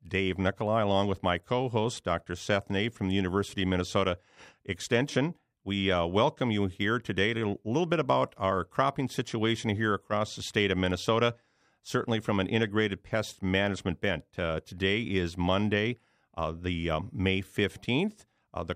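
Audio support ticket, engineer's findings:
No faults found on listen-through of the speech clip; no dropouts, distortion or timing irregularities to attribute to any component.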